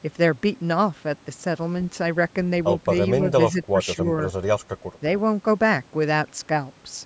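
An echo canceller that likely could not tell the near talker from loudspeaker echo while both sides spoke at once has turned this speech clip down twice, from 3.52 to 3.75 s and from 3.95 to 4.06 s, giving speech suppressed in double talk. The voice dips by around 10 dB in short patches, the audible loss totalling roughly two tenths of a second, against a call-microphone band that stops at 8 kHz.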